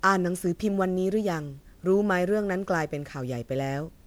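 Throughout the speech, the signal has likely been decoded and re-encoded with a lossy codec about seven times, which fits repeated MP3 coding at around 128 kbit/s. This generation loss leaves a swirly, hollow sound, smeared consonant attacks and built-up quantisation noise.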